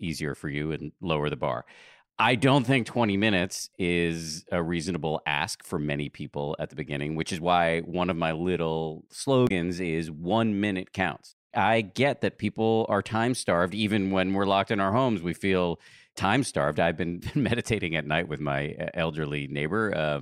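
At 9.45 to 9.51 s, after "one of my little", damaged data in the compressed stream throws the decoder off. A brief glitch results.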